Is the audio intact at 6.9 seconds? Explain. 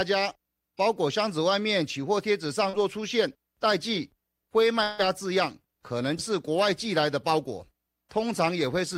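Yes, the speech at 6.9 seconds is intact, with no dropout, click, distortion or other fault audible at that moment.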